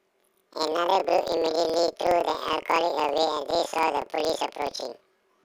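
Throughout, planar audio read as interleaved: the speech jumps an octave higher with a flutter near 21.5 Hz, from 46.4 ms blocks, which fits 2048-sample planar blocks.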